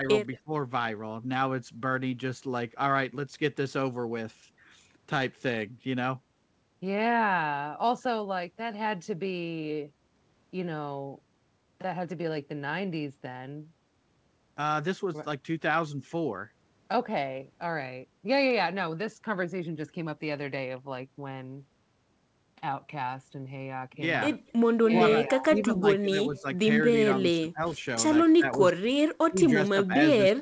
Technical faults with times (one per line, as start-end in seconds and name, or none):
0.01-0.52 speech suppressed in double talk
24.47-24.52 echo leak
24.80-27.79 speech suppressed in double talk
25.56-25.64 echo leak
26.37-26.41 echo leak
28.36-30.42 speech suppressed in double talk